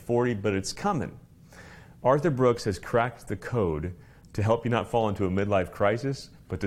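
No technical fault can be heard anywhere in this clip. At no point does anything stand out that would need a time to be marked.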